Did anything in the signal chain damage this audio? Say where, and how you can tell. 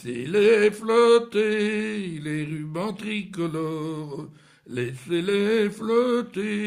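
No, nothing in the signal chain audibly damaged this audio.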